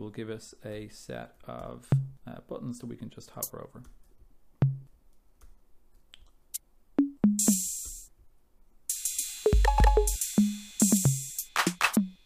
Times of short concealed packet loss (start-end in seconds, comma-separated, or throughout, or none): none